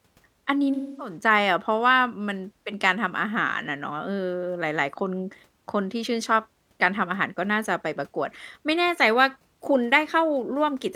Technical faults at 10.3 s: none

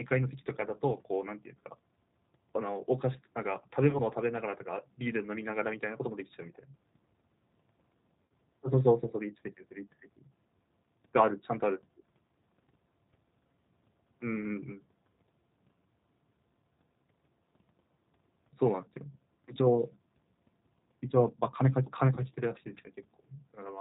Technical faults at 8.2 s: G.729 codec; VoIP packet loss concealed by the speech codec

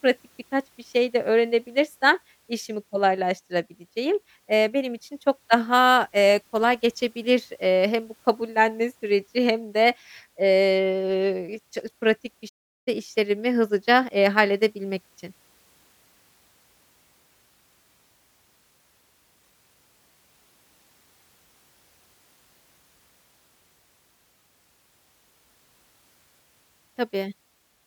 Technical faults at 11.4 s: none

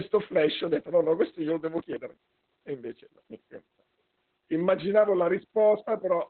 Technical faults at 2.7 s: Opus voice compression

